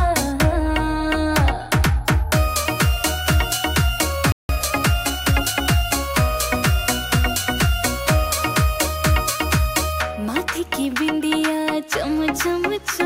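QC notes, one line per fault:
4.32–4.49 s, playback stall: the sound cuts to silence for about 0.17 s mid-flow, then resumes; the player likely ran short of data or was briefly blocked.
4.49–5.63 s, time-compressed catch-up: the audio runs about 1.15 times fast at unchanged pitch, as small pieces are cut and cross-faded to clear the backlog.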